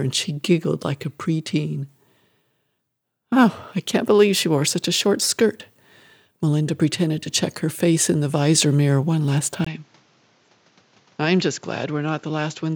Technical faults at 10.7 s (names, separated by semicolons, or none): input switched to a poorer device